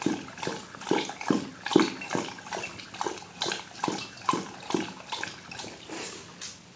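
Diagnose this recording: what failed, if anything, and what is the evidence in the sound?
Nothing stood out on listening; the sound comes through the call path as expected, with nothing above about 8 kHz, which fits a G.722 wideband codec.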